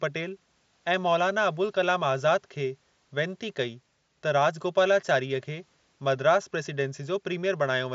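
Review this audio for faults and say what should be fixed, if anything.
No faults; nothing needs fixing.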